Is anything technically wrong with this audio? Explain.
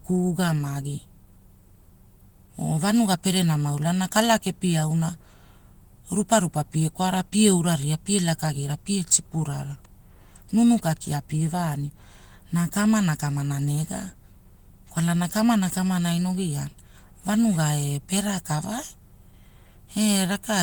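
No, nothing technically wrong stood out on listening to this speech clip.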